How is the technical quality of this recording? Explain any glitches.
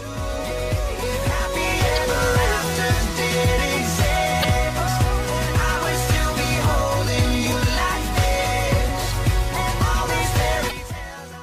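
The recording has four short glitches from damaged data in a compressed stream, at 1.96–1.98 s, 4.40–4.45 s, 7.49–7.53 s and 10.68–10.72 s. Corrupted bytes make the decoder misread frames and lose sync, so each glitch is a brief chirp or blip, often skipping ahead.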